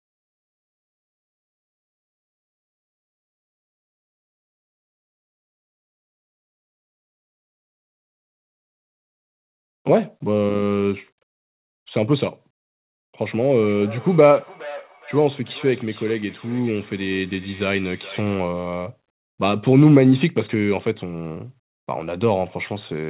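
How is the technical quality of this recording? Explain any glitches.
The recording has one glitch, a stretch of feedback echo between two devices. From 13.55 to 18.5 s, a second device in the room replays this speech and its microphone feeds it back, so each phrase returns roughly every 0.4 s, thinner and ringing, peaking about 19 dB below the speech. Throughout the clip, the narrow call codec leaves nothing above 4 kHz.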